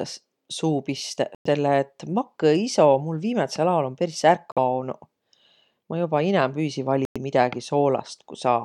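The speech drops out at 1.35, 4.52 and 7.05 s for about 105, 48 and 105 ms, then resumes: a Bluetooth stall, likely from interference starving the headphone buffer.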